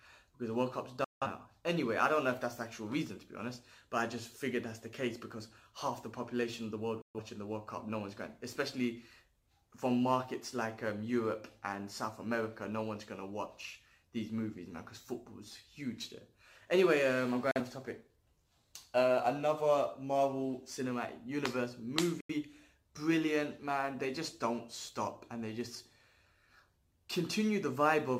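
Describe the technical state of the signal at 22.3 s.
At 22.3 s there is a digital broadcast dropout from 22.21 to 22.34 s: the receiver muted on corrupt frames, giving a 3 ms fade into silence, consistent with roughly two lost frames.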